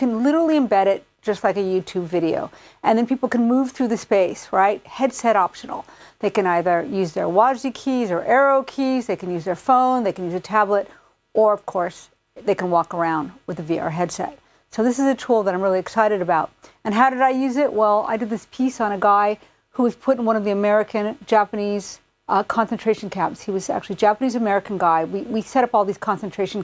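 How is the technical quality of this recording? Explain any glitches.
Nothing stood out on listening; I heard no glitches anywhere in the recording.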